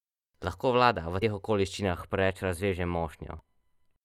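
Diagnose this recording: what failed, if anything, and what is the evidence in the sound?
Two things went wrong here. The first is damaged data in the compressed stream, at the codec or storage stage. Right after "vlada v", at 1.21 s, there's a short blip, and another at 3.39 s. Each is a tiny glitch lasting well under 20 ms. Some bytes in the file got corrupted, so the decoder misread those frames, lost sync and had to hunt for the next valid frame header before it could carry on.

The second is channel delay with comb filtering, which points to the wiring or mixdown stage. From just after "vlada v teh" at 1.83 s through to 4.01 s, the speech goes thin and a bit phasey, with the top end hollowed out. One channel is running a fraction of a millisecond late, which fits a delay of only a few samples. When the two channels are summed to mono, the shared content cancels at regularly spaced frequencies, with the first notch landing around 5 kHz.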